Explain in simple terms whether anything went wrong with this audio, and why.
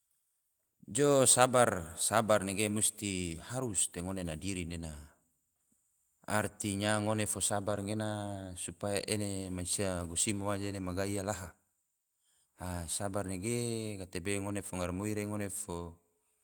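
Around 7.71 to 7.77 s, between "artinya ngone fo" and "gena supaya ene mansia", there's a brief rough, noisy patch in the speech: a lost packet rebuilt from error correction. A couple of packets went missing, and the decoder filled the roughly 40 ms gap from rougher backup copies.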